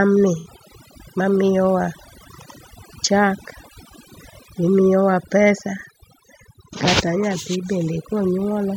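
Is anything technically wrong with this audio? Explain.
Yes, there are two faults.

Overdone noise removal runs through the whole clip. The noise reducer cuts individual frequency bands hard whenever they sit near its noise estimate, and quieter speech components go with them. The background drops and breaks up into twinkling specks.

AAC frame loss with concealment occurs from 0.39 to 0.47 s. A gap of about 64 ms, consistent with three lost frames, is bridged by the decoder reusing the last good spectrum with altered signs or interpolated energy. The result is a brief smeared, phasey patch in the speech.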